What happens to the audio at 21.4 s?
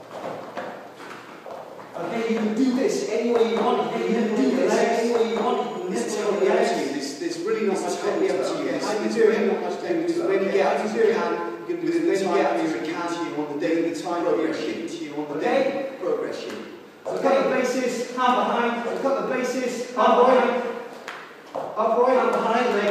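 At 21.4 s a doubled audio track is running, as it does throughout: a second full-band copy trails the original by about two seconds at roughly equal level, with no decay or room colour. It likely comes from a slower second capture path or misaligned edit.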